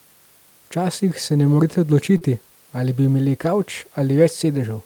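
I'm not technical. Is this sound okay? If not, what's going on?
No. There are two brief glitches in this speech, both from the call's connection.

The first is a short concealed packet loss at 2.17 to 2.23 s, right after "se ne morete" and just before "ali bi imeli". About 40 milliseconds of audio never arrived in time. The receiving end covered the hole by stretching out the sound it had just played, then blended back into the real audio. You hear it as a quick smear or wobble.

The second is a lost packet rebuilt from error correction, at 3.43 to 3.45 s, shortly after "ali bi imeli". This points to one lost chunk of about 20 milliseconds. The next chunk carried a rough backup copy of it, so nothing goes silent, but for that instant the sound is coarser and noisier than the audio around it.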